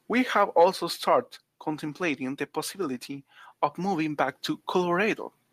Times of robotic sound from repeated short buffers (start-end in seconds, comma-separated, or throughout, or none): none